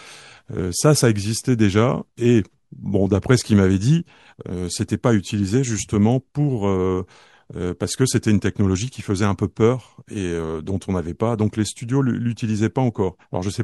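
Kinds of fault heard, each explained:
No technical fault can be heard anywhere in this speech clip. There is therefore no kind of fault to name or explain.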